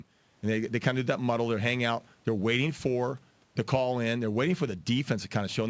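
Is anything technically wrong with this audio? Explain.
No, nothing in this speech recording stood out as a technical problem on listening.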